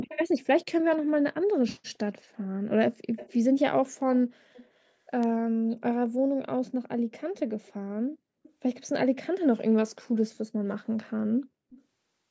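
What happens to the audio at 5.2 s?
At 5.23 s the speech is hit by a bit error spike: a single flipped bit corrupts three consecutive samples, throwing their values off by a power of two before they snap back. It is heard as one sharp tick, unrelated to the speech around it. On the waveform it appears as a narrow vertical needle standing out from the surrounding signal; on a spectrogram, a thin broadband line running up the full height.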